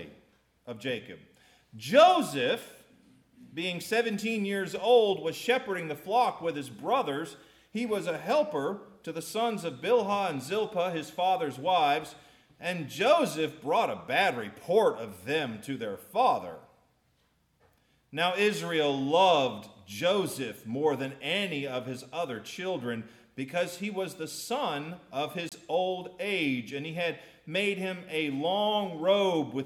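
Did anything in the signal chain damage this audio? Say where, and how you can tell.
Yes. A Bluetooth dropout hits from 25.49 to 25.52 s, a gap of about 27 ms where the output goes silent, then picks up as if the sound had carried on underneath. That places the damage at the wireless playback link rather than in the recording: the likely cause is audio packets arriving too late at the headphones and being discarded, and a hole that size fits roughly two lost packets.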